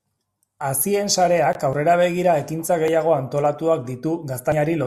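No technical faults are audible anywhere in this speech recording.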